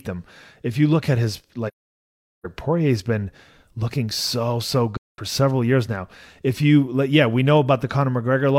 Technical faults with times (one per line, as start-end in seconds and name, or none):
1.67-2.45 AAC frame loss with muting
4.97-5.19 AAC frame loss with muting